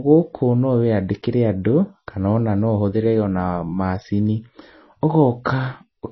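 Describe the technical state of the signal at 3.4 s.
At 3.4 s the speech sounds watery and swirly, with nothing above 5.9 kHz, as throughout the clip; likely heavy MP3 compression, consistent with a bitrate near 24 kbps.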